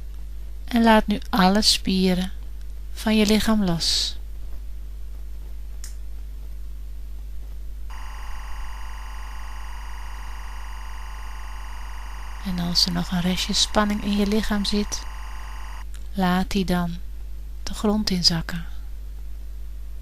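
Timecode bleed from linear timecode running at 24 frames per second on an adjacent track or cable leaks into the audio from 7.9 to 15.82 s. Its square wave flips between roughly 1 and 2 kHz, putting a steady chirping warble about 20 dB beneath the sound.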